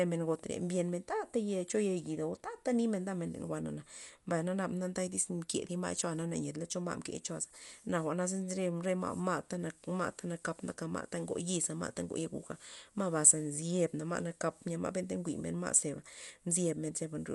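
A speech recording with Dolby Digital compression artefacts that are plainly audible from start to finish. The band stops sharply at about 11.4 kHz, leaving the sound dull, and a rough, fluttering noise surrounds the tonal parts of the signal. This is likely AC-3-style coding at a low bitrate, one consistent with roughly 64 kbps. The encoder narrowed the band and left many frequency lines without mantissa bits, so the decoder filled them with dither noise.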